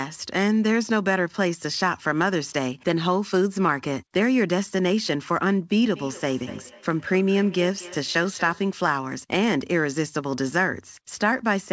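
From 5.88 to 8.77 s, speech comes back as thin, ringing repeats roughly a fifth of a second apart, about 18 dB down: feedback echo between two devices, one microphone recapturing the other's playback.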